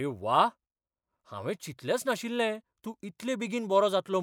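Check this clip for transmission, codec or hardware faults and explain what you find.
One fault is audible in this speech. From 2.53 to 2.56 s a brief glitch cuts in. This is damaged data in a compressed stream: corrupted frames are misread, the decoder loses sync, and it jumps ahead to the next valid frame header.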